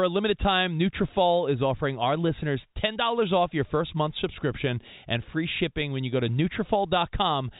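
Nothing stood out as a fault on listening to this speech recording, which comes through the telephone coding path as expected.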